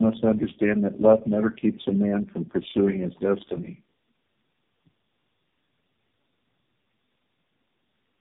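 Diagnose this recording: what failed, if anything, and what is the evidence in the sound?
The failure is tandem speech coding, at the codec stage. It runs through the whole clip. The speech sounds rough, muffled and warbly. Nothing is present above 3.8 kHz. The texture points to three low-rate speech coders in series, ending in a very low-rate AMR-NB mode near 5 kbit/s. At each network border the speech was decoded and coded again. Every coder modelled the previous one's errors as if they were speech, so the distortion stacked up.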